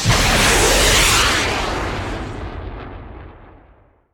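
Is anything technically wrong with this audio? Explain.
No, nothing technically wrong stands out here; the audio sounds fine the whole way.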